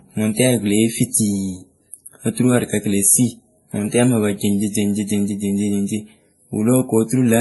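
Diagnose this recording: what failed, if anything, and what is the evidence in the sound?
The failure is at the codec stage. The speech sounds like it went through transcoding between lossy codecs, most likely a low-rate MP3 pass followed by a WMA encode. The fault runs the whole length of the clip. Nothing is heard above 11.5 kHz. Two sets of artefacts are heard together. The second encoder spent its bits re-coding the first encoder's artefacts. It kept the lowest cut-off in the chain and added its own damage.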